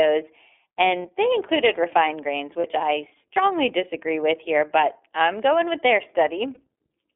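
iLBC codec coding runs throughout this speech recording: the line is confined to roughly 250 Hz to 3.5 kHz, and each frame's excitation is coded independently, leaving a plainly audible rough, synthetic edge that fits iLBC's 13.33 kbps, 30 ms frame mode. Lost iLBC frames occur at 1.02 s (just before "they included refined grains"), 2.61 s (between "they included refined grains" and "I strongly disagree with") and 6.54 s (just after "I'm going with their"). Each gap of about one 30 ms frame is filled with a repeated pitch cycle plus noise, heard as a brief buzzy held vowel, and the voice recovers at once.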